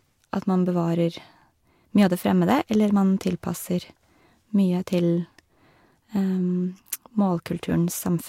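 Right near the end of the speech, at about 7.69 s, there's a case of compressed frames skipped. Roughly one frame, around 20 ms of audio, never gets decoded, so the sound jumps ahead.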